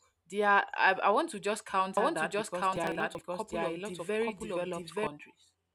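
A speech recording with a doubled audio track from 1.97 to 5.07 s: a full-band copy about as loud as the original, roughly a second behind, starting and stopping abruptly with no echo-like decay, likely from a second capture path. From 2.73 to 3.21 s, processor overload crackle tears through the sound as short skips, not level-dependent clipping, fitting buffers of about 10 ms missed repeatedly.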